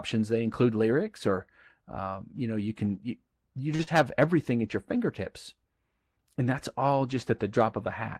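At 3.75 to 3.82 s, just after "you can you you", a short stall from a late packet holds the sound for about 38 ms while the jitter buffer sits empty. Nothing is lost, so the sound resumes where it left off. It is a brief sustained smear, not a gap, and everything after arrives 38 ms later.

Straight after, at 3.83 to 3.90 s and before "have everything at your", short concealed packet loss follows. Here 40 ms of audio never arrived and about 35 ms of synthesized continuation covers the hole. Unlike the stall, real material is gone, heard as a quick smear or wobble.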